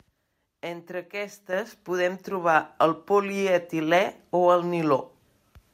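At 1.53 s, just before "podem trobar el", the microphone volume stepped up: software raised input gain by about 8 dB, lifting voice and background together abruptly.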